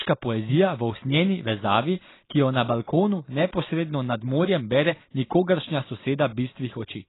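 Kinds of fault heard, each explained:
AAC compression: heavy damage throughout the speech, with nothing above 3.9 kHz, so it sounds dull and smeared. The likely cause is AAC-LC coding at a very low bitrate, consistent with about 16 kbps, where the encoder discards the upper spectrum and coarsely quantises the rest.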